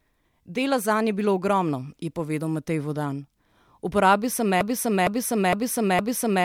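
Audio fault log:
4.61–6.44 s, broken-record loop: from 4.61 s the speech stops moving forward and a single 460 ms fragment plays back to back, four times, exactly the same each time, until the clip ends at 6.44 s. You get that stuck, stuttering repetition because something in the chain, most likely the player or stream stalling, kept resending the last chunk it held. The speech that should have filled those final couple of seconds is simply gone.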